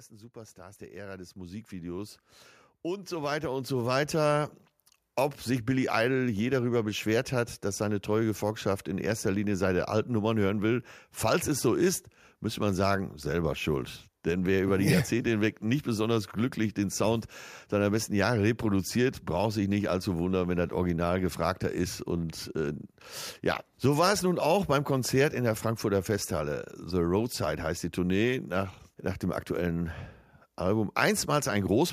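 From 0.11 to 2.27 s, then again from 2.9 to 4.51 s, automatic gain rising lifts the level by about 9 dB and about 8 dB as the control judges the input too quiet. Speech and background noise swell together, drawing a gradually widening waveform envelope and brightening spectrogram.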